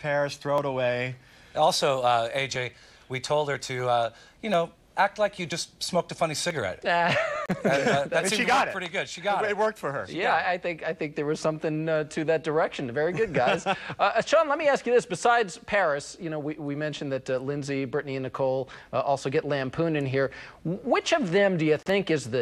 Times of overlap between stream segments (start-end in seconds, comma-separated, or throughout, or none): 0.58, 1.57, 2.56, 3.55, 4.54, 5.52, 6.51, 7.49